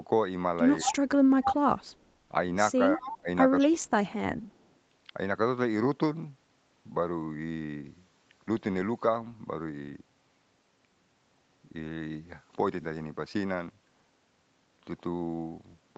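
From 0.81 to 0.95 s a copy of the speech trails it by 200 ms, about 5 dB below it. This is echo leak, likely from a loudspeaker echo canceller letting the far end's sound through. At 0.82 to 0.99 s the main talker dips by about 20 dB, which is speech suppressed in double talk: the canceller likely turned everything down while both sides spoke. The echo returns, quieter at about 15 dB down, from 1.42 to 2.03 s. From 2.94 to 3.28 s the talker ducks again by about 20 dB, with a brief echo from 3.02 to 3.17 s. Another echo sounds at 3.59 to 3.67 s, then a deeper dip of about 30 dB from 3.64 to 4.00 s. A last, barely audible echo at about 40 dB down comes from 4.48 to 4.66 s, again 200 ms behind.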